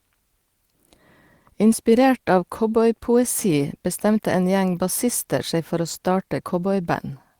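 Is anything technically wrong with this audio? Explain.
No, nothing is technically wrong with this audio.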